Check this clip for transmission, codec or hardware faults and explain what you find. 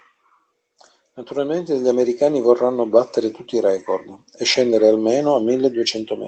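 Nothing here points to a transmission, codec or hardware problem; the speech simply carries the ordinary sound of an Opus call link at about 20 kbps, with the top end stopping around 8 kHz as that setting would give.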